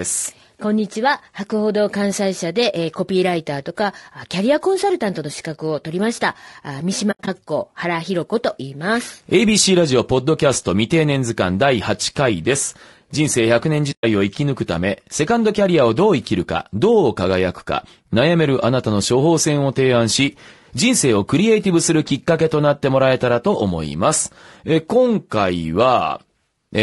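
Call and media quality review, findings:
Low-delay AAC compression, whole clip: speech sounds rough and grainy throughout, with noise filling the gaps between harmonics and a thin, synthetic top end. Likely AAC-ELD, the low-delay call codec. Its short frames smear pitch detail and eat bits, and the damage level fits a bitrate around 32 kbps. Plainly audible.

AAC frame loss with muting, 7.11 to 7.28 s: patchy soft holes over about 160 ms, around 120 ms missing in total, longest gap around 70 ms. The decoder zeroed the lost frames, and the overlapping windows fade out and back in.

Same fault at 13.91 to 14.04 s: soft-edged dropout, about 120 ms missing in total, consistent with several frames lost and muted.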